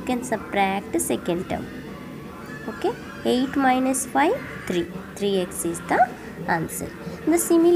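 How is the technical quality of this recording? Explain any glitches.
No glitches or technical faults can be heard here.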